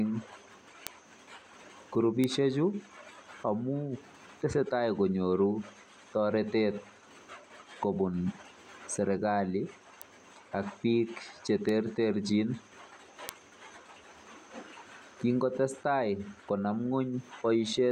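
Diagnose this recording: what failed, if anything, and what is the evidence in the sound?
A bit flipped on a digital link or in storage causes bit error spikes: one-to-three-sample broadband ticks at 0.87, 2.24, 10.02, 11.69 and 13.29 s, up to about -10 dBFS.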